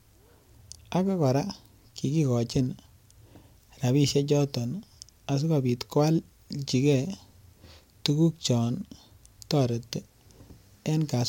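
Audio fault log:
No faults heard.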